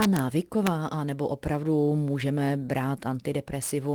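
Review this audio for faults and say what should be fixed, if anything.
Integer overflow cracks at 0.02–0.19 s and again at 0.67 s. Peaks that only just reach full scale wrap around to the opposite sign, giving violent snaps much sharper than the flattened tops of ordinary clipping. Prevent it by using saturating arithmetic or a limiter so that sums and gains clamp at full scale instead of wrapping.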